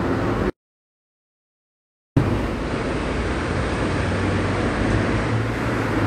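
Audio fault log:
0.50 to 2.17 s, audio dropout to silence: The input signal was most likely lost for about 1.67 s, through a disconnect, a failed link or a stray mute, while the recorder kept writing silence. The sound cuts off abruptly and resumes just as abruptly. The gap between is plain silence with no room tone or noise floor, and whatever sound occurred during that stretch is simply gone rather than muffled or reduced.
2.44 to 5.58 s, digital radio blending to analogue: The receiver lost its digital stream and cross-faded over roughly 309 ms to the station's FM broadcast, then blended back at the end. A steady hiss sits roughly 35 dB under the signal, and the level shifts by about 1 dB at each blend, a small step.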